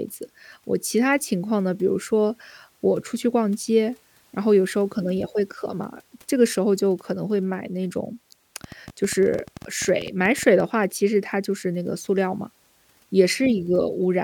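From 8.64 to 10.61 s, a train of clicks runs over the speech. About twenty similar pulses arrive at roughly 11.2 per second, unevenly spaced. They peak about as loud as the speech itself. Interference from nearby equipment is the likely cause.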